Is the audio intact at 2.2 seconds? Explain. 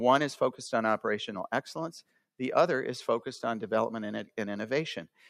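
No. Sound cut by the noise suppressor runs from 2.02 to 2.24 s, where the suppressor mistook the sound for background noise and pulled it down, by about 18 dB at its deepest, so for roughly a fifth of a second it sinks in level.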